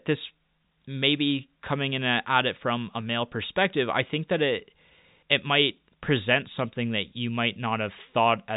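No technical faults are audible.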